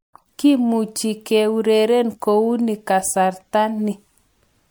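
Throughout the speech, the sound is swirly, smeared and hollow. Consonant attacks blur. The cause is likely generation loss: MP3 encoding repeated about three times, each pass adding fresh quantisation noise and spectral holes. The sound points to roughly 96 kbit/s. Nothing sits above 20.1 kHz.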